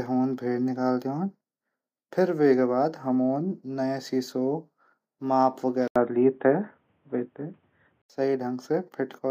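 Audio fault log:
5.88–8.10 s input switched to a poorer device: after an 80 ms gap the sound turns boxy, with nothing above 3.8 kHz, a level shift of around 5 dB and faint new background noise about 45 dB down, likely from another microphone. The gap and changed noise distinguish it from mere filtering.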